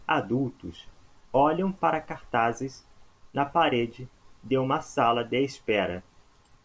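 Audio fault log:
No fault is heard in this speech clip.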